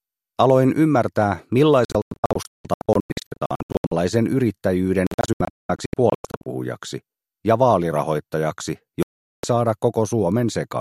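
The audio suffers repeated digital broadcast dropout. From 1.85 to 3.92 s it mutes in scattered holes totalling 1.2 s, the longest 168 ms. From 5.07 to 6.46 s the holes total 0.74 s, the longest 192 ms. From 9.03 to 9.44 s there is one solid 0.41 s silence. The gaps are clean mutes whose lengths fit whole 24 ms frames rejected by the receiver. Unlike network packet loss, there is no smeared concealment, and the programme resumes later rather than delayed.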